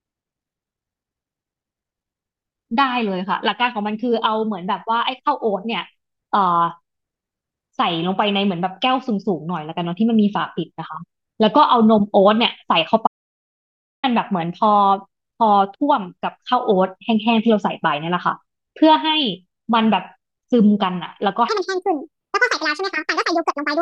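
An audio dropout to silence runs from 13.07 to 14.03 s: the speech cuts to silence for about 0.96 s, likely because the input was briefly lost while recording continued. A section at the wrong speed follows, from 21.49 s to the end: playback runs 1.67 times too fast, likely from a clock mismatch, so the speech turns hurried and rises roughly ten semitones.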